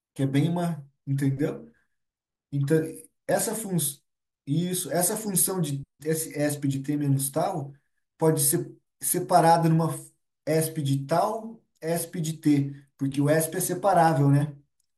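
At 14.08 s the stream likely lost a handful of samples, a tiny fraction of a millisecond, so the waveform jumps straight to a later value. These dropped samples remove no audible speech; the jump is heard as one sharp click.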